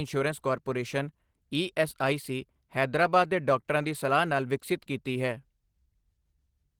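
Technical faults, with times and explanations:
Throughout, Opus voice compression: the speech sounds hoarse and slightly robotic because the low band is coded with a coarse linear-prediction excitation and the upper band with a thin CELT layer. The band stays full, and the damage fits roughly 16 kbps.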